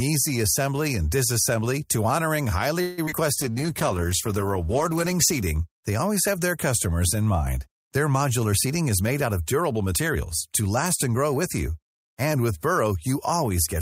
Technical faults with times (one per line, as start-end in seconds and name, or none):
2.81-3.00 call audio freeze
3.06-3.14 short concealed packet loss
3.41-5.44 call bitrate drop
3.50-4.01 jitter buffer slow-down
8.52-10.16 jitter buffer speed-up